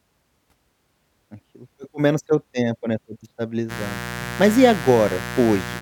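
From 3.68 s, right after "seu tempo né foi", a raspy mains buzz sits about 10 dB below the speech. Switching spikes on the 60 Hz supply leak in.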